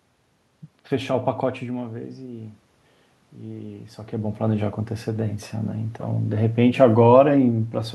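From 3.43 s to 5.39 s there is automatic gain rising. The input had dropped by about 13 dB, and the gain climbed about 4 dB over two seconds. Unlike the talker moving near 4 s, the room noise swells along with the speech.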